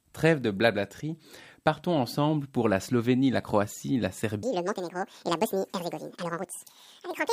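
From 4.43 s to the end, the speech abruptly turns high and hurried: the voice jumps up by roughly ten semitones and the delivery rushes along at 1.87 times its natural pace, with pitch and tempo shifting together at the same instant. This is a section at the wrong speed, likely caused by that stretch being played back or rendered against the wrong clock, so the samples run out faster than they were captured.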